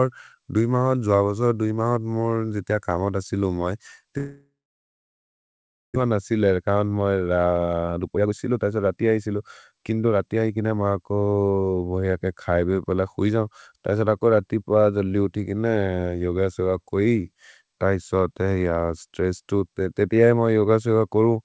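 Right after "जितिअ कमहोत सिलो मै", at 4.18 s, the sound smears into a buzzy tail that fades out, then it's dead quiet until 6.06 s, when it picks up at "न सिल" with about a second gone. That's most likely a long network dropout.

Then the jitter buffer speed-up kicks in as the receiver works off the backlog: 6.50 to 6.76 s runs at 113%, and 7.3 to 10.86 s at 120%. Tiny pitch-period slices get cut out, so it sounds rushed while the pitch stays put.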